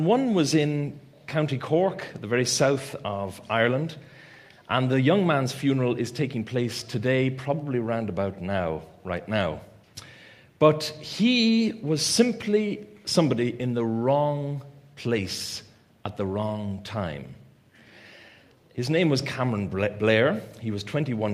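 No technical faults can be heard anywhere in the audio, and the signal stays steady and intact throughout.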